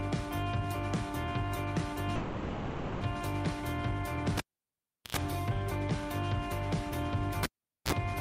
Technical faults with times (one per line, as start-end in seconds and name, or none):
2.15-3.03 call audio freeze
4.37-5.17 cable pulled and plugged in
7.43-7.92 cable pulled and plugged in